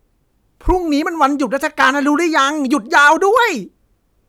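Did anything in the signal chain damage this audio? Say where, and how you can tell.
Yes: hard clipping, most likely at the converter or a fixed-point format stage. There's a brief crackle at 0.70 s (about 2 dB over), then harsher fuzz from 1.80 to 1.89 s and 2.95 to 3.37 s (about 5 dB over), where flattened peaks throw off high harmonics.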